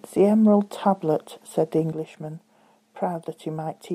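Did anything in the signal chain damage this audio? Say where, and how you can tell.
Yes. A sudden gain jump at 1.92 s drops the speech and the background noise together by about 6 dB in a single step, holding that level to the end. Likely a digital gain setting applied without a ramp, as opposed to AGC, which would glide.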